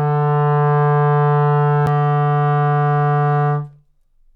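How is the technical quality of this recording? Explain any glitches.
One glitch affects the recording: a CD skip at 1.86 s. The laser jumped to another turn of the disc's spiral, so playback mutes for a few milliseconds, giving a short tick, then resumes from a different point, making the sound jump abruptly.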